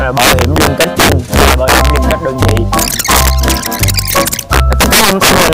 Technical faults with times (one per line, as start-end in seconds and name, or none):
0.00-5.53 integer overflow